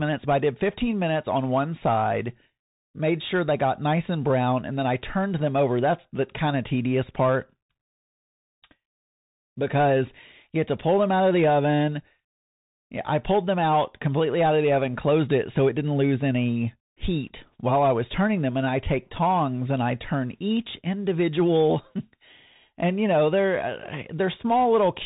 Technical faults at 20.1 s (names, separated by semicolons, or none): Bluetooth CVSD headset codec